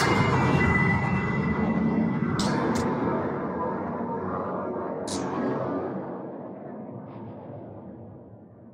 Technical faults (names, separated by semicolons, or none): drift correction step